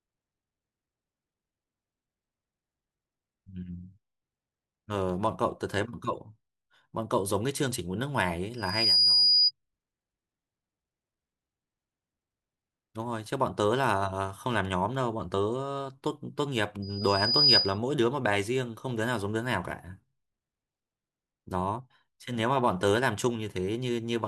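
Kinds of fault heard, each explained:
Loudspeaker feedback squeal: at 8.57–9.51 s and 16.82–17.78 s a pure tone near 4.9 kHz swells up, quickly the first time and more slowly the second, to about 10 dB above the speech, as the microphone re-hears its own loudspeaker and loop gain exceeds unity there.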